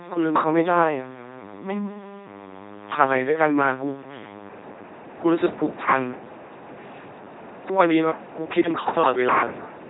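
Throughout, an LPC-10 vocoder rebuilds the speech from a pulse-or-noise source and a ten-pole filter, which fits a 2.4 kbit/s rate, giving heavy buzzing robotic tone with nothing above 3.9 kHz.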